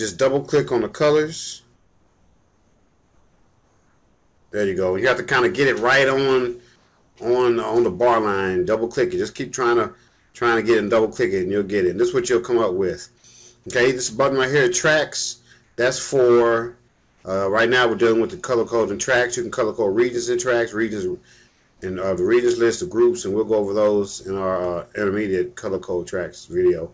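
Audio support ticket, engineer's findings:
Comfort noise in place of the background at 1.74–4.52 s, 6.76–7.16, 10.08–10.34, 15.64–15.78, 16.88–17.24, 21.48–21.82 s. Pauses turn flat, featureless, about 2–5 dB quieter. Likely DTX on the sender; receiver synthesizes the noise. Band stops at 8 kHz, fitting G.722.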